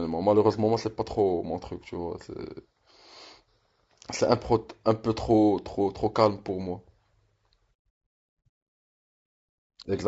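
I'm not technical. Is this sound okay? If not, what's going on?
No. The speech sounds rough and grainy from start to finish, with a hiss between the voice's tones and a dull, artificial top end. That is likely low-delay AAC compression, the quick-response squeezing used for video calls, which saves data by blurring detail.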